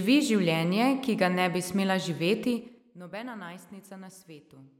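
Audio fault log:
2.51–2.88 s, zipper noise: right after "ga ne bi smela" the speech gets pulled down by roughly 15 dB in bare 4 dB jumps, about ten a second, with no smoothing between them. Each jump clicks, so you hear a brief ticking zip over the fade.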